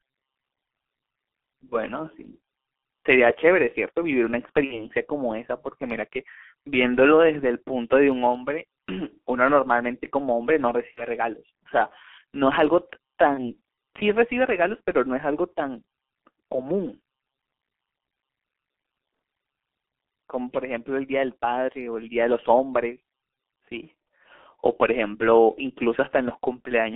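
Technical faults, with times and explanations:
throughout G.723.1 codec: speech sounds muffled and hoarse with blurred consonants, confined to 300 Hz to 3.4 kHz; slow, coarse coding consistent with a roughly 6 kbit/s link.
4.64–4.87 s, 10.92–11.05 s and 13.34–13.53 s VoIP packet loss concealed by the speech codec: speech smears into a buzzy tone or coloured noise that fades and stays weak afterwards, as the decoder extrapolates across lost audio of about 60, 60 and 30 ms.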